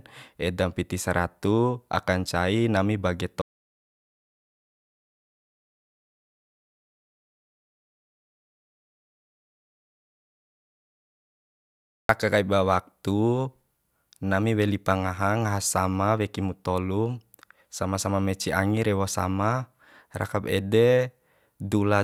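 At 3.42 s the speech cuts off mid-flow and the clip falls into an audio dropout to silence. It lasts until 12.09 s, so about 8.7 s is missing. The gap is silent, with no room tone or hiss beneath it. The input was likely lost, through a disconnect, a failed link or a mute, while recording carried on writing silence. The speech then resumes abruptly, and whatever was said in between is gone.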